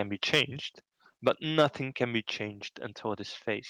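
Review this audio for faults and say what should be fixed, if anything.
Microphone overload at 0.33 to 0.41 s, 1.27 to 1.29 s and 1.58 to 1.66 s: the loudest peaks go harsh and crackly, likely from input gain driving the converter about 3 to 5 dB past full scale.

Microphone volume stepped down at 1.28 s: the level drops by about 2 dB in one step, right on the second distorted peak, likely as the call software pulls back the input gain.

To prevent both, set the microphone's input gain lower before the call so that peaks stay several decibels below full scale.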